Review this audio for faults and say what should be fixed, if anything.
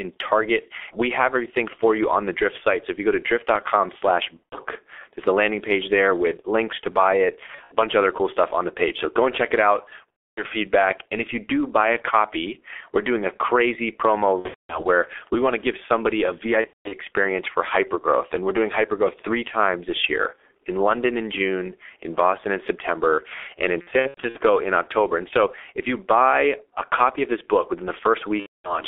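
The whole speech recording carries heavy G.723.1 codec damage. The band stops at about 300 Hz and 3.5 kHz, and the coarse, slowly updated voice model makes it muffled and hoarse with smeared consonants. The damage fits a bitrate around 6.3 kbit/s. On a spectrogram, nothing shows above 3.5 kHz and the harmonics look blocky. Use a wideband codec at a higher bitrate.

VoIP packet loss concealed by the speech codec occurs at these times:
4.44–4.57 s
7.46–7.73 s
10.12–10.43 s
14.39–14.87 s
16.61–16.95 s, between "to give somebody a" and "for hypergrowth"
23.81–24.39 s, after "and in"
28.40–28.81 s, after "of this book within"

In each gap the decoder repeats its last pitch and filter at falling gain, giving a buzzy tone or coloured noise that fades, and where three or more frames are lost in a row it is muted from the third. These show as smeared, repeated harmonic stripes and decaying waveform envelopes. 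Use jitter buffering and forward error correction to prevent this.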